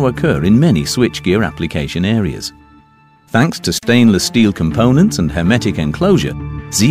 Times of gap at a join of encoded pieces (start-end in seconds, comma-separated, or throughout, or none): 3.78-3.83